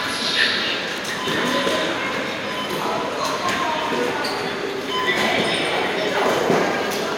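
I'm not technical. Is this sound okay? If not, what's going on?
Yes, nothing in this sound seems wrong or broken.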